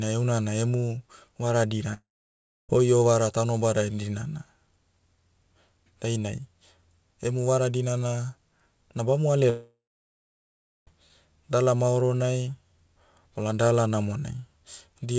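Long network dropouts at 1.94 to 2.72 s and 9.50 to 10.90 s: the last sound stretches into a fading buzz, then about 0.64 s and 1.08 s of silence. This is likely packet loss, and about 0.75 s and 1.38 s of speech are gone for good. Throughout, the call audio stops at 8 kHz, which fits G.722 at 64 kbps.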